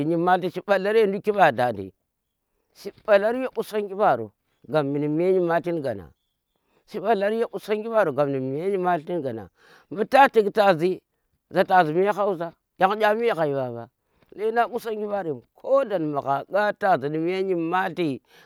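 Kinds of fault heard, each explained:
No technical fault of any kind can be heard in this speech recording. Nothing calls for an entry here, since no problem turns up at any point in the audio.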